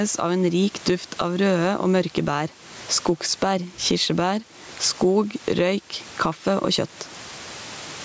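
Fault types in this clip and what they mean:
Gain pumping: the gain swings around 15 dB, and loudness is squashed. Likely cause: gain set far too high with a fast limiter.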